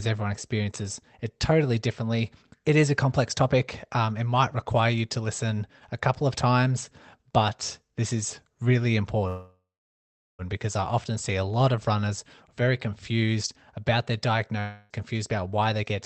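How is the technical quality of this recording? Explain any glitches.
The recording is a speech call with three timing glitches. It passed through a call codec that cuts off everything above 8 kHz and adds coding noise, which fits a low-bitrate Opus link.

From 9.27 to 10.42 s there is a call audio freeze, likely from packets held up in transit until the jitter buffer emptied. The last sound is stretched into a fading buzz or hiss, then about 760 ms of silence. The speech then resumes exactly where it stopped, so nothing is lost, but about 1.1 s of extra delay is added.

From 14.60 to 14.93 s there is a long network dropout. About 0.3 s is again filled with a fading continuation of the last sound. Unlike the freeze, 400 ms of speech never returns: the audio jumps ahead past the missing part, and the delay shrinks by roughly a tenth of a second.

From 15.46 to 15.96 s there is a jitter buffer speed-up. 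The receiver trimmed short pitch-period slices, roughly 50 ms in total, to reduce its excess delay. The speech runs at 108% speed and sounds hurried, yet its pitch stays the same. That distinguishes it from a simple playback-rate change.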